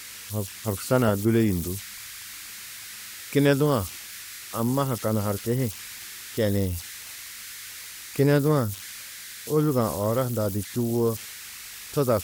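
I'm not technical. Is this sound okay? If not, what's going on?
No. A high whistle, somewhere around 2 kHz, runs through the whole speech clip from start to finish. It is clearest in the pauses, and under quieter speech it turns into a grainy fizz. These are converter idle tones: when the signal going into the recording chip gets very small, the chip slips into repeating patterns that sing as tones. Unlike steady mains hum, this whistle is high and stands out most in the quiet moments.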